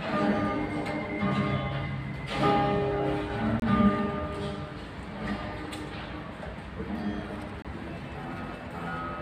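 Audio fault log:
3.60–3.62 s and 7.62–7.65 s, gap between chunks: the sound is delivered in 4-second chunks with a 25 ms silence inserted at each join, likely from codec padding or a late-starting player, so playback briefly stops without losing content. Spectrogram shows narrow blank vertical stripes; the waveform collapses flat there.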